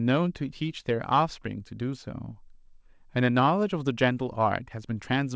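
The speech comes through a call path with no technical faults, and its content stops at about 8 kHz, which fits a wideband call codec such as G.722.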